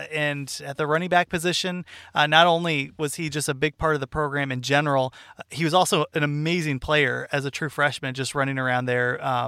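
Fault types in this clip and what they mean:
Nothing stood out on listening to this speech clip.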